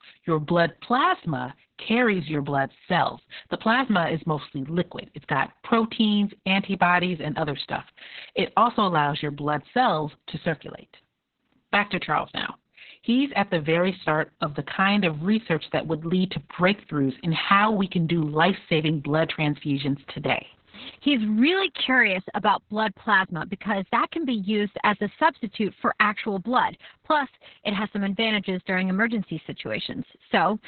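From start to finish the speech carries heavy Opus voice compression. Nothing comes through above about 4.3 kHz, so the band has collapsed to narrowband. That fits the SILK coder running at a very low bitrate, around 6 kbps, with long 60 ms frames. The excitation is coded coarsely. Voices sound muffled and hoarse, with a faintly robotic edge. Sibilants are dulled and airy detail is simply gone.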